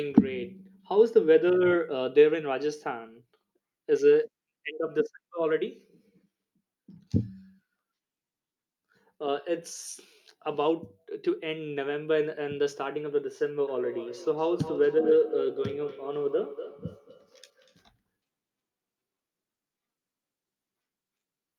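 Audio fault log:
13.68 to 17.79 s, feedback echo between two devices: the speech comes back as a thinner, ringing copy roughly every fifth of a second, peaking at about 10 dB below the direct speech. Two devices in the same room are sharing one call, and one is playing out what the other's microphone sent. That microphone picks the playback up and sends it round again. Each device's echo canceller removes only its own output, so nothing catches this returning signal.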